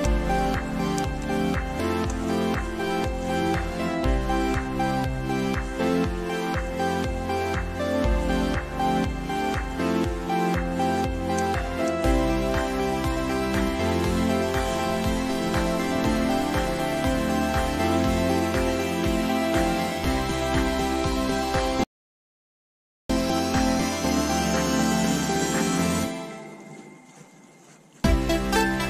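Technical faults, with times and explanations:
21.84 to 23.10 s, audio dropout to silence: the sound stops abruptly and comes back just as suddenly about 1.26 s later, and the gap in between is silent, with no room tone or hiss at all. That dead-flat gap suggests the input itself went away, likely a momentary disconnect or mute upstream, while the recorder kept writing silence. Whatever was happening during that stretch simply isn't there.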